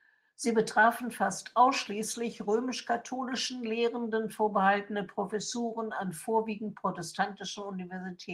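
No technical faults are audible.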